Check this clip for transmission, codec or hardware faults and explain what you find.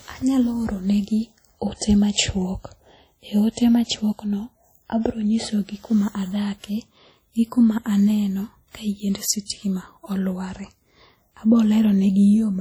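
One fault runs through the whole speech clip: heavy WMA compression is the likely cause. Long transform blocks smear quantisation noise around each syllable, giving ringing, washy speech and a hiss that breathes with it, which fits a low bitrate near 32 kbps. Unlike a band-limited codec, content still reaches about 20.1 kHz.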